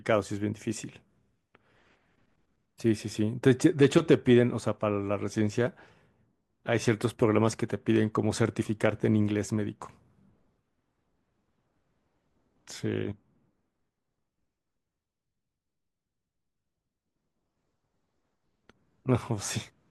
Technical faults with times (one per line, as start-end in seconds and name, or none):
2.69 audio missing between chunks
5.67 audio missing between chunks
8.65 audio missing between chunks